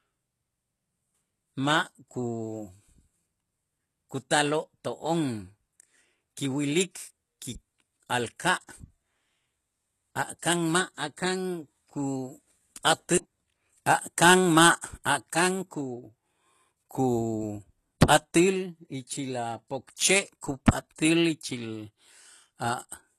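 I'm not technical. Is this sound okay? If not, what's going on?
No. Throughout the speech there is HE-AAC compression damage, likely from squeezing the file very small. The top of the sound, nothing above about 12.3 kHz, is rebuilt by copying lower sounds upward, so s sounds turn gritty and metallic.

Pre-echo occurs at 14.81, 15.04 and 20.41 s, and from 20.96 to 20.98 s. The compression spreads its noise across short chunks of time, so a short hiss leaks in just before each sharp sound starts, softening and smearing its beginning.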